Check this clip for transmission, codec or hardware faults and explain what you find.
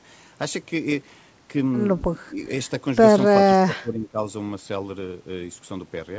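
Two dips in the speech level point to one fault: speech suppressed in double talk. The audio has nothing above 8 kHz, which fits a wideband call codec such as G.722 at 64 kbps, and that band limit is normal for the call path.

From 2.24 to 2.38 s the speech drops by about 10 dB for roughly 150 ms. From 3.65 to 4.2 s it drops by about 15 dB for around half a second. The likely cause is an echo canceller that could not tell this talker apart from loudspeaker echo while both sides spoke, so it turned the near-end speech down. On a waveform both spans show a sudden pinch in the envelope. On a spectrogram they appear as faded bands across the speech energy.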